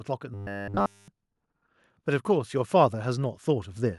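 Speech, with robotic sound from repeated short buffers between 0.34 and 1.08 s: essentially the whole stretch becomes a rigid metallic buzz fixed at 100 Hz, which fits a 10 ms segment likely being looped while new audio fails to arrive. Unlike a pitch shift, that buzz pitch never moves with the voice.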